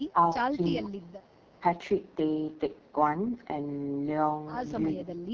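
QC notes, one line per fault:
throughout: AMR wideband (HD Voice) codec at 6.6 kbit/s, heavily rough and raspy; the spectrogram shows a band-limited, smeared texture with nothing above 6.8 kHz.
0.12–0.18 s, 0.8–1.32 s, 1.59–1.63 s, 4.92–5.34 s: speech suppressed in double talk, likely from an echo canceller ducking the talker; the waveform shows gain dips of roughly 10 to 25 dB, deepest in the 0.8–1.32 s stretch.
1.22–1.57 s: echo leak, likely from an uncancelled loudspeaker path; a very faint copy delayed 384 ms sits far below the speech, visible as a weak repeated trace on the spectrogram.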